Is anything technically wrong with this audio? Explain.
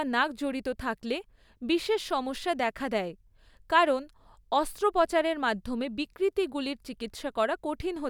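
No, nothing in the signal stands out as a technical problem, and the speech comes through steady and intact.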